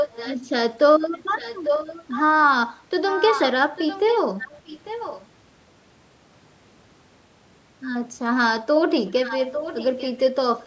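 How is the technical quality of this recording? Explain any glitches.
The main problem is echo leak: a delayed copy of the speech comes back about 0.85 s late, in seven patches at 0.0–0.41 s, 1.13–2.22 s, 3.1–3.5 s, 3.76–4.19 s, 4.4–5.27 s, 9.07–10.22 s and 10.61–10.66 s. Early on it's strong, only a few dB under the speech, then it fades to much quieter by the end. It's likely a speakerphone whose echo canceller let some of the returned audio through, with the top end of the call's band stopping around 8 kHz.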